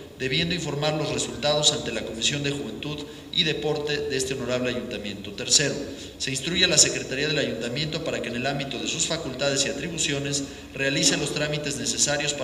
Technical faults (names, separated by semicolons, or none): none